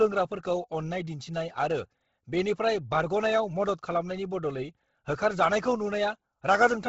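Speech runs throughout with heavy codec damage: nothing above 7.7 kHz, and a breathy, grainy hiss where upper detail should be, likely Bluetooth LC3 compression at a low rate near 16 kbps, with 10 ms frames. A plain low-pass would leave a clean, dull top instead of noise filling.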